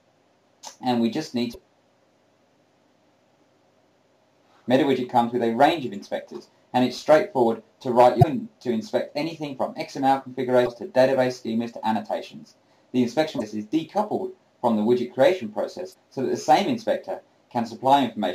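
Damaged data in a compressed stream at 1.50, 8.19, 10.62, 13.36 and 15.90 s: 50 to 60 ms glitches where the decoder misreads corrupted frames, then resyncs.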